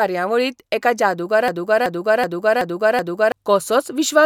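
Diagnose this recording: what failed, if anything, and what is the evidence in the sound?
The playback or stream buffer likely stalled and kept re-sending the last fragment it held, a broken-record loop. From 1.48 s to 3.32 s the speech stops moving forward: one piece of about 0.38 s plays five times back to back, each repeat identical and butted straight against the next. Whatever speech should have filled those 1.8 seconds never arrives. Normal audio resumes at 3.32 s with that stretch missing.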